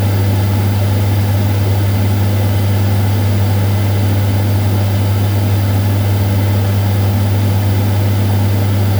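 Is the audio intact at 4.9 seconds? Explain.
No. At 4.9 seconds a steady, thin hiss sits roughly 20 dB below the sound and rises sharply toward the top of the band, as it does throughout. This is low bit depth with noise shaping, consistent with about 6-bit quantisation whose rounding error is pushed upward in frequency.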